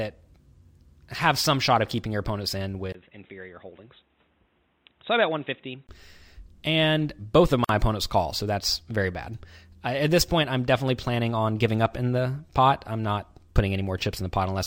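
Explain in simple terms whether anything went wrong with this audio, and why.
Two things go wrong in this speech recording.

From 2.92 to 5.89 s the speech turns dull and boxy, noticeably quieter, with a new layer of background hiss. A short silence of about 20 ms marks the change. Nothing above 3.9 kHz comes through, so the crisp upper part of the speech is missing. The likely cause is an input switched to a poorer device, such as a headset in call mode, which passes a narrower band and has its own level and noise.

From 7.64 to 7.69 s, a hole of about 48 ms opens in otherwise continuous speech, with softened edges, and the speech then picks up exactly where it stopped. This is a gap at a join of encoded pieces. The recording was compressed in separate chunks and stuck back together without trimming, so the bit of silence each chunk carries at its start and end was left in at the seam.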